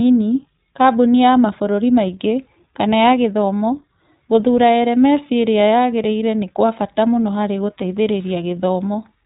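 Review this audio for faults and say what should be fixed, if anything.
The whole speech clip has the telltale sound of the iLBC codec. Everything above roughly 3.8 kHz is gone, so it's boxed into a narrow phone band, and the codec damage is plainly audible: that slightly rough, synthetic texture you get when each short frame's excitation is coded on its own without borrowing from the last one. The character fits the 20 ms, 15.2 kbps mode. To avoid it, record or send this through a wideband codec such as Opus, or keep an uncompressed copy.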